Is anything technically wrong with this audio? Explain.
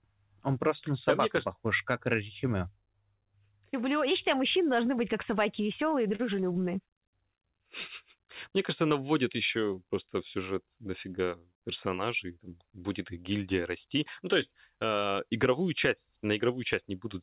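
Yes, there are two short stalls from a late packet in this speech, at 6.15–6.21 s and again at 6.52–6.57 s. Each time a packet arrived late and the jitter buffer ran dry, so the receiver held the last sound for about 40 ms and then 29 ms until the data turned up, and playback resumed where it left off. Nothing is lost, but the sound briefly drags with a faint buzz or dip. The call path's band limit, with nothing above 4 kHz, is audible throughout.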